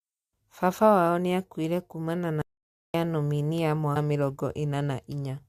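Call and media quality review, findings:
Call and media quality review, findings:

Audio dropout to silence, 2.42–2.94 s: input likely lost, recorder kept writing silence. Speech cuts after "niakuire kumana", returns at "ya nominia"; about 0.53 s of silence, no room tone.

Stream segment skipped, 3.95 s: a stream segment likely failed to load and the player moved on to the next. After "ya nominia" the speech jumps ahead with a brief blip.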